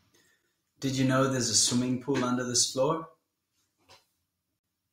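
Two separately encoded pieces of the speech were joined without trimming the encoder's start-up delay and end padding, leaving a gap at the join of encoded pieces at 4.59 s. The sound drops out for a 47 ms gap, its edges smeared so the truly silent part is shorter, then resumes where it stopped.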